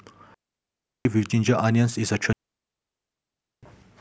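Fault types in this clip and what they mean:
digital wireless dropout: The radio link between transmitter and receiver lost too much data, so the receiver muted the speech with a very quick fade rather than passing on corrupted audio. The result is a clean hole of near silence. No burst of noise comes before or after it. It happens twice here. The first gap runs from 0.34 to 1.05 s, about 0.71 s long. The second runs from 2.33 to 3.63 s, a full 1.3 s.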